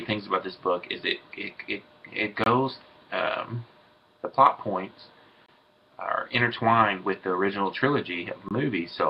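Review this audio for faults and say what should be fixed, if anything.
You've got a gap between chunks problem: short holes of about 23 ms at 2.44, 5.46 and 8.49 s. They land every 3 s of sound, so the audio is being handled in 3-second chunks, with each chunk followed by a little dead air before the next one starts. Nothing's missing, but the flow gets chopped at every join. To prevent it, have the player queue each chunk ahead of time so it plays right as the previous one ends, and strip any padding between chunks.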